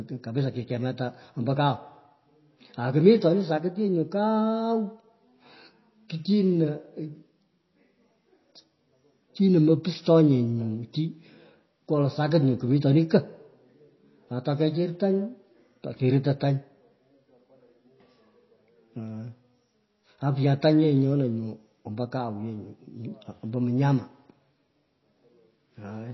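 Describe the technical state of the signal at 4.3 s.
At 4.3 s the speech shows MP3 compression, present across the whole clip: nothing above 5.8 kHz, with watery, swirling artefacts from bits dropped frame by frame, likely a very low bitrate near 24 kbps, unlike a plain low-pass filter.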